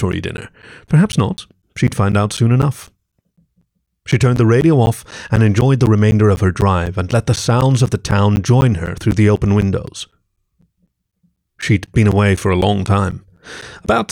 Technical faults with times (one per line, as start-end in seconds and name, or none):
0.12-13.87 periodic USB or driver dropouts